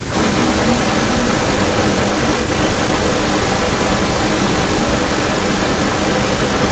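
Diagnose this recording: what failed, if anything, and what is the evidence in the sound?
A delayed second copy of the speech trails the original by about 0.31 s, running from 0.09 s to the end and sitting roughly 5 dB louder than the direct sound. This points to an echo leak at the call-processing stage, likely a far-end echo canceller failing to remove loudspeaker pickup.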